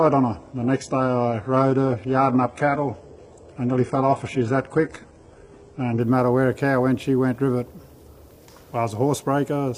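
For the first 6.0 s you're hearing an adaptive stream starting at a low bitrate. The player grabbed a cheap, quick-loading version first, and the sound gives it away: dull and smeared, with treble that sounds synthesised rather than real and nothing above 11.1 kHz. That fits HE-AAC at about 12 kbit/s. At 6.0 s it snaps up to something sounding like AAC-LC around 96 kbit/s, with no gap.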